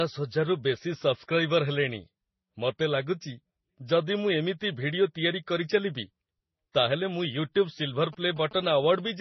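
Throughout the speech, nothing sounds above 5.9 kHz, and two different kinds of coding damage sit together: watery, swirling high-band smearing alongside a second, grainier layer. This likely comes from transcoding between lossy codecs, a low-rate MP3 stage re-encoded through Vorbis. A single codec would leave only one artefact character.

From 8.04 to 9.09 s, GSM signalling bursts appear: a galloping dit-dit-dit of short buzzes repeating at about 217 Hz, sitting well below the speech. A nearby phone's radio bursts are being rectified in the audio circuit. The gated rhythm distinguishes this from steady mains hum.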